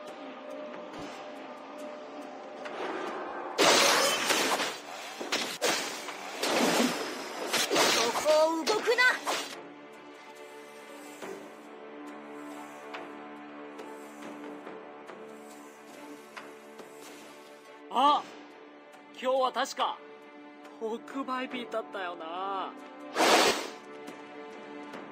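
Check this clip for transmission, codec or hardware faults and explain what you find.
The clip has four brief dropouts from lost LE Audio frames. Light lossy compression is also present but sounds as expected. Lost LE Audio frames occur at 0.99 to 1.02 s, 3.29 to 3.33 s, 8.21 to 8.24 s and 23.47 to 23.51 s, each lasting 30 or 40 ms, which fits three or four 10 ms frames. The LC3 decoder fills each gap by repeating the last spectrum with scrambled signs. The result is a short, noisy smear.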